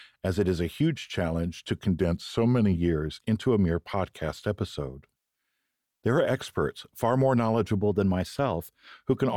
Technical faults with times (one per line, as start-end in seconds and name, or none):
2.00-2.77 drift correction step
7.78-8.93 drift correction step